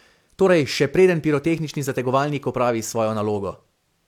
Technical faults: none

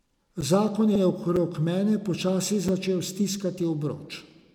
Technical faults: block of digital silence; repeated frames

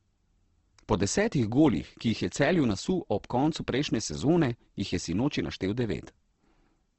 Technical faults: Opus compression

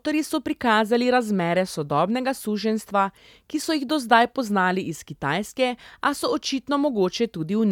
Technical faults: none

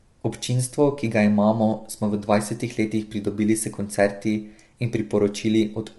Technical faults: low-delay AAC compression

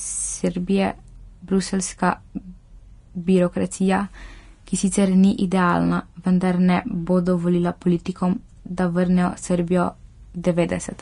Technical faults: Vorbis compression; pre-echo

